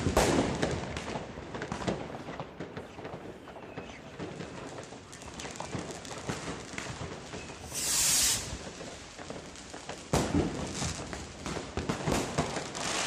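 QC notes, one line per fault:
1.37 s: overlap between stream segments. About 9 ms of audio is dropped where two segment time stamps overlap, so the waveform jumps, heard as a tiny skip.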